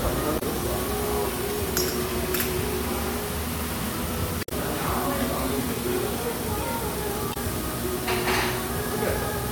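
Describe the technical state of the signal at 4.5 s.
Right at 4.5 s you're inside a stretch of damaged data in the compressed stream, running from about 4.40 to 4.52 s. The decoder hits corrupted bytes, can't read those frames properly and loses sync until it finds the next header, so you get a brief chirp, squawk, click or short hole.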